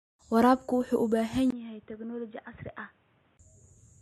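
At 1.50 s the input likely switched to a poorer device. After a 20 ms gap, speech turns quieter and boxy, cut above 3.8 kHz, until 3.39 s.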